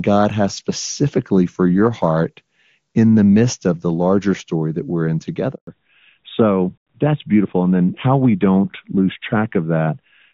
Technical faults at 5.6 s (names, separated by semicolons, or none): handover gap; fallback to narrowband